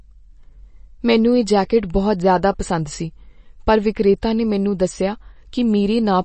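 Throughout, the speech sounds watery and swirly, with nothing above 8.3 kHz, likely from MP3 compression at a low bitrate near 32 kbps; unlike simple low-pass filtering, flickering spectral holes smear sibilants.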